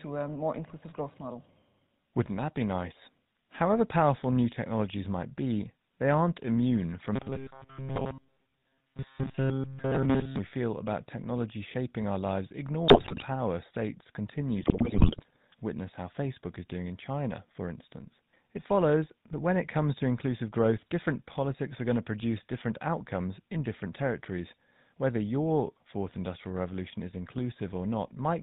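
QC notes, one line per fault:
Throughout: GSM full-rate codec. The speech has a buzzy, gravelly roughness and nothing above 4 kHz, because the coder rebuilds the vocal tract from a sparse pulse excitation, which fits 13 kbps GSM. Unlike bit errors, this coloration is steady and never breaks into bursts.
7.16 to 10.38 s: robotic sound from repeated short buffers. After "immune from" the speech becomes a rigid metallic buzz near 134 Hz, lasting until "we feel about technology". The likely cause is a short block of about 7.5 ms being replayed, with much of the underlying audio (roughly 70 percent) repeated rather than new. It differs from codec roughness in its fixed, unchanging pitch, which still loosely tracks the syllables.
12.88 to 13.23 s and 14.56 to 15.36 s: GSM bit errors. Just after "technology shaping our lives" and again a second later, the speech breaks into squawks, pops and gargling. 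Corrupted filter, pitch and gain values distort the spectrum and level frame by frame, the first burst with the denser errors, about 7.4 percent against about 3.6 percent. Unlike the robotic buzz, the damage is erratic rather than a fixed tone.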